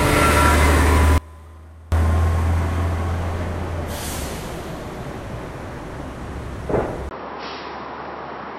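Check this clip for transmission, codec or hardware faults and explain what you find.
Two faults are present: a short dropout early on and an input change near the end.

From 1.18 s to 1.92 s the sound falls away abruptly to a faint residue, an audio dropout lasting about 0.74 s. What remains in the gap sits about 25 dB below the normal level, so the path stayed live while the wanted signal was lost, likely through a momentary break upstream. The cut and the return are both sudden, not a fade.

At 7.09 s, after a 20 ms silence, the sound continues to the end through what is likely an input switched to a poorer device. Nothing passes above 5.6 kHz from that point, so the top end goes dull and boxy. The level stays roughly the same, and a new noise floor appears, around 55 dB below the signal.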